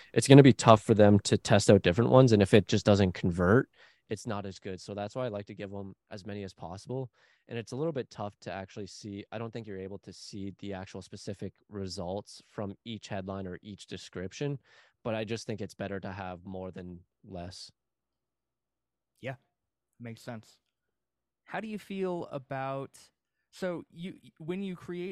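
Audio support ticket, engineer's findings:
No audible faults found in the speech recording.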